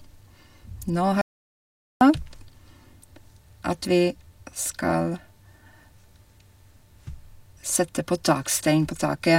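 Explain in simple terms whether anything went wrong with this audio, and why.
An audio dropout to silence hits the speech from 1.21 to 2.01 s: about 0.8 s becomes dead silence, likely from a briefly lost input connection.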